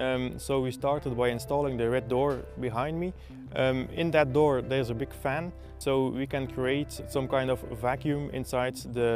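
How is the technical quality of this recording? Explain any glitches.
No glitches or technical faults can be heard anywhere.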